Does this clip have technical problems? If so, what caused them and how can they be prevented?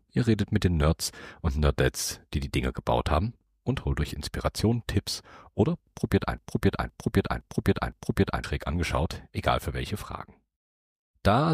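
Yes. From 6.38 to 8.44 s the audio falls into a broken-record loop: a fragment of about 0.51 s plays four times back to back, identical each time. The likely cause is a stalled player, encoder or stream that kept resending the last piece it held, so whatever should have sounded in those two seconds is missing. Monitoring buffer health and resetting the stream on a stall, instead of replaying stale data, would prevent it.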